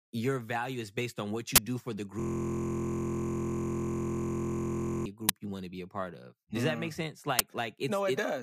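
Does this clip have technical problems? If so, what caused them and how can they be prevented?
Yes. There are two kinds of fault. The first is an uninitialised buffer, heard three times as a short, very loud crack of digital noise: from 1.56 to 1.58 s, at 5.29 s and at 7.39 s. The bursts last about 23 ms, 6 ms and 12 ms, which fits blocks of 1024, 256 and 512 samples. Each one happens because the playback buffer was sent to the output before any audio had been written into it, so whatever leftover memory it held was played as samples. To prevent it, clear every buffer to zero when it is allocated, and output silence whenever the audio callback has not filled a block in time.

The second is a system hang loop, from 2.20 to 5.06 s. It sounds like a harsh, steady buzz at about 43 Hz in place of the speech. The same 23.22 ms slice repeats exactly, well over a hundred times. This happens when the computer or driver stalls while the sound hardware keeps cycling through its ring buffer, which fits a 1024-sample buffer being replayed. 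To prevent it, use a watchdog that mutes the output when the buffer stops being refilled, and fix the driver or process that stalls.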